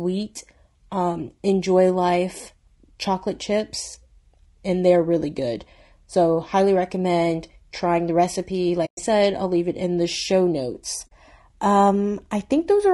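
From start to finish the speech sounds rough and grainy, likely from low-delay AAC compression of the AAC-ELD kind used in video calls, at a rate near 32 kbps. At that rate a spectrogram shows noise filling the gaps between the harmonics and a smeared upper band.

At 8.85 to 8.99 s and again at 11.07 to 11.12 s there is AAC frame loss with muting, about 120 ms and 40 ms gone. The waveform tapers smoothly to silence and back, leaving clean blank columns on the spectrogram.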